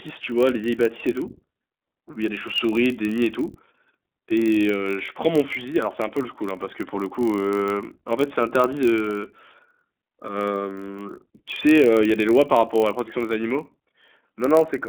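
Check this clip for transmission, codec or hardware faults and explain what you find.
Two faults run through the whole speech clip: narrowband iLBC coding and a padded block size mismatch.

iLBC codec, throughout: each 20 ms frame's excitation is coded independently, consistent with the 15.2 kbps mode. Nothing passes above 3.5 kHz, so the speech sounds plainly rough, thin and synthetic.

Block size mismatch (padded), throughout: a stage writes slightly short blocks, and the zero fill leaves a gap in each one. This produces a steady 46.9 Hz buzz, which fits a 1024-sample read block. Playback runs 0.999 times normal speed.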